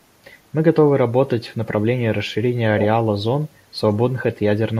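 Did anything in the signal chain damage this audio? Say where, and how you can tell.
Yes, at the call-processing stage. From 2.78 to 2.86 s a delayed copy of the speech trails it by 126 ms, roughly 10 dB below. This is echo leak. The far end's echo canceller likely let loudspeaker pickup through and sent it back.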